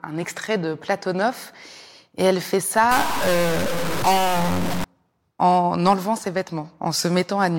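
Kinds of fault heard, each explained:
Stuck bit: From about 2.91 s, after "et elle fait", until 4.84 s, before "en enlevant ses", the speech turns harsh and buzzy, and quiet gaps fill with noise. The likely cause is one data bit held at a fixed value, throwing about half the samples off by a step near -20 dBFS. On a waveform the trace looks jagged and offset in small jumps. A spectrogram shows a broadband haze over that span, even between syllables.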